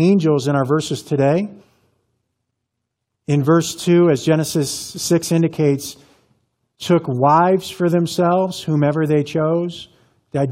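No technical faults are audible.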